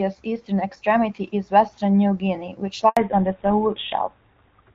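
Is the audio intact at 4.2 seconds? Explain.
No. A fallback to narrowband runs from 2.97 s to the end. The codec drops from HD Voice to an older GSM-style narrowband one, removing everything above 4 kHz and leaving speech duller.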